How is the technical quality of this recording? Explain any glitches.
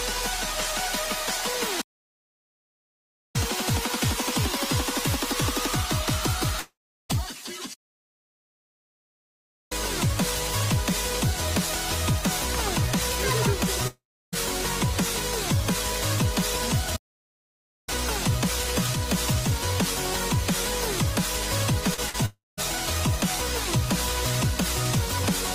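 The recording is repeatedly interrupted by three kinds of glitch.

Playback stalls occur at 1.81 to 3.36 s, 7.74 to 9.72 s and 16.96 to 17.89 s. Each is likely a player starved of data. The sound halts in mid-flow, then resumes where it stopped.

Long network dropouts occur at 6.59 to 7.11 s, 13.87 to 14.34 s and 22.26 to 22.59 s. Each likely comes from audio that never arrived. A fading buzz extends the last sound, then silence follows, and roughly half a second, a third at the last, is lost.

Short concealed packet losses occur at 21.94 s and 22.10 s. About 40 ms of audio was missing each time. The receiver bridged the gap by continuing the previous sound, heard as a brief smear.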